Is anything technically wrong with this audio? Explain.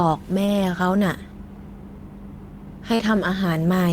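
Yes. Short concealed packet loss occurs twice in this speech: about 20 ms of audio at 0.45 to 0.49 s, and about 40 ms at 2.95 to 3.01 s, did not reach the decoder in time. The receiver filled each gap by extending the preceding sound, carrying on its pitch where voiced or substituting shaped noise where not, before blending back into the real signal. The result is a brief smear or wobble at each point, longer at the second.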